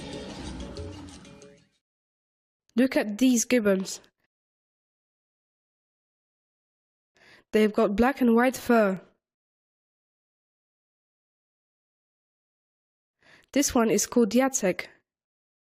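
Overlapping chunks at 2.95, 8.97 and 14.98 s: each 3.0 s chunk starts before the last ends, so 6.5 ms plays twice, heard as a brief click.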